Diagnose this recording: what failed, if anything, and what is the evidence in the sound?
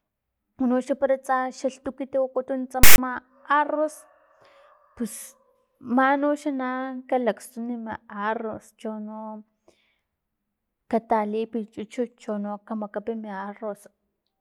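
The fault is at the storage stage: file tags played as audio. At 2.83 s the speech is cut by a hard-edged burst that runs to 2.98 s, about 0.15 s. Part of it is a loud, buzzy rasp pushed off to one side, and part is silence. That pattern fits a block of text metadata with zero padding being decoded as samples. The character codes form a lopsided waveform, and the padding reads as zeros.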